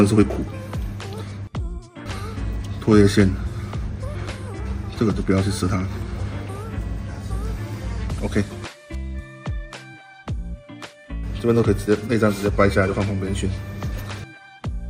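Nothing technically wrong can be heard in this audio.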